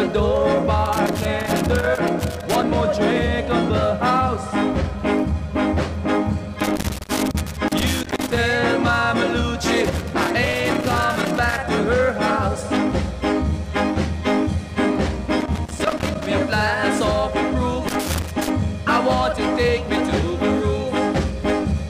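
Loose connector crackle breaks up the audio in irregular bursts at 0.86–2.64 s, 6.60–8.39 s, 9.84–11.58 s, 15.41–16.27 s and 17.88–18.50 s, where a worn contact keeps making and breaking. Unlike evenly spaced digital clicks, the scratching is ragged and chops the signal itself.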